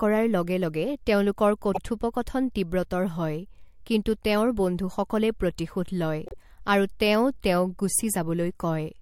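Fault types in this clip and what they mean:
Repeated frames: part of the compressed stream is decoded twice, so the speech jumps back and replays the same 52.2 ms once, at about 1.74 s and again at about 6.26 s. That block length fits a pair of codec frames. Each repeat is heard as a brief stutter and adds 52.2 ms to the clip. Unlike a dropout, nothing is lost or silenced: the sound is duplicated rather than cut out.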